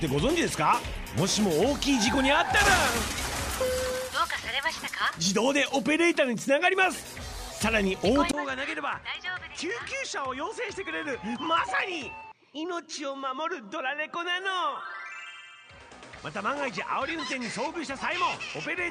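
At 8.31 s the sound steps down in quality and stays that way to the end: a gap of about 20 ms, then a duller, boxier tone with nothing above 9.4 kHz, a level drop of roughly 10 dB and a new, faint background hiss. This is likely an input switched to a poorer device. A filter or EQ change alone would not also bring the gap, the level drop and a different noise floor all at once.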